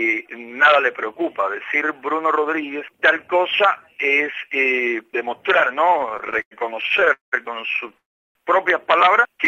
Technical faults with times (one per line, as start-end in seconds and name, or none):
5.85-7.34 repeated stalls (stutter)
7.98-8.37 call audio freeze